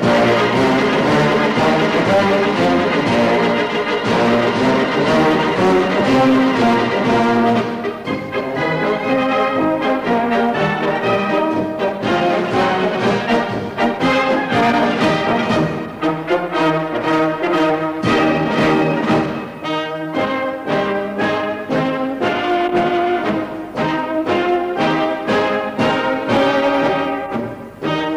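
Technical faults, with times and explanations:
No technical faults can be heard anywhere in the signal.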